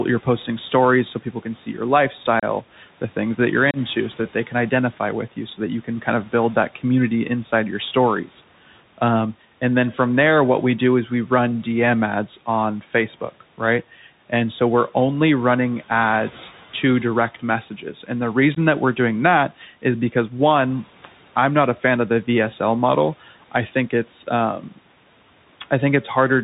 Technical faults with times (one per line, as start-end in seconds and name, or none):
0.00-26.43 Bluetooth CVSD headset codec
2.40-2.44 unconcealed Bluetooth headset packet loss
3.71-3.78 unconcealed Bluetooth headset packet loss
17.70-18.09 speech cut by the noise suppressor
18.55-18.57 unconcealed Bluetooth headset packet loss
19.50-19.84 speech cut by the noise suppressor
24.59-24.79 speech cut by the noise suppressor